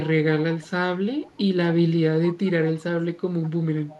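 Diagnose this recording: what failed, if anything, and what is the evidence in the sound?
Call processing: echo leak at 0.61–0.7, 1.23–1.37, 3.42–3.5 and 3.88–3.99 s. Faint speech copies arrive about 200 ms late and roughly 25–30 dB down, showing as weak ghost harmonics trailing the originals on a spectrogram. The likely cause is the far end's echo canceller passing residual loudspeaker pickup.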